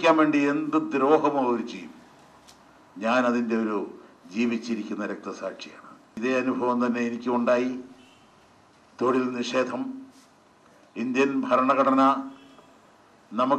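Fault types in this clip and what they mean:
Dropped samples at 4.72 s: a single sharp click, seen as a thin vertical line through the spectrum. The likely cause is a couple of samples missing from the stream, so the waveform jumps to a later value; far too brief to remove any sound.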